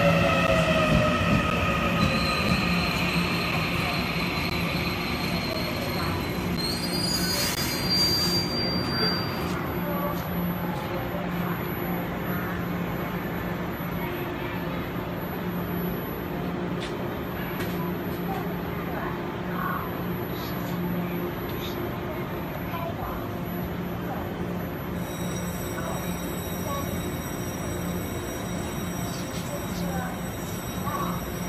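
Gaps between stream segments fall at 0.47, 1.50, 2.49, 3.52, 4.50, 5.53, 6.57 and 7.55 s, once per one-second segment. Mismatched timestamps leave 4 to 16 ms holes that the player fills with silence, giving hard-edged dropouts.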